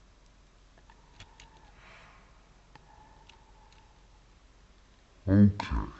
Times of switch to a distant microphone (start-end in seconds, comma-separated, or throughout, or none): none